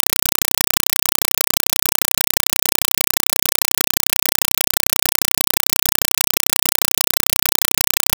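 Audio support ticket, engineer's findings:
Loud, harsh chattering static for the whole clip, with no speech audible. Bursts of noise about 4 ms long repeating at 31.25 Hz, with silence between. Compressed stream played as audio: Dolby Digital (AC-3) passed over S/PDIF/HDMI as plain PCM, undecoded. Burst density fits roughly 192 kbps.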